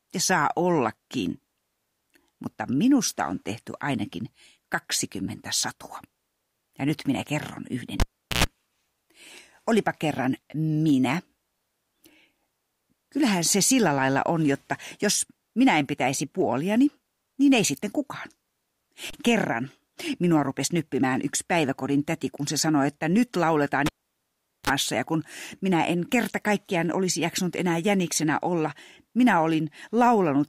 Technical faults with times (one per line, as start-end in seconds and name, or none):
8.00-8.44 cable pulled and plugged in
23.86-24.70 cable pulled and plugged in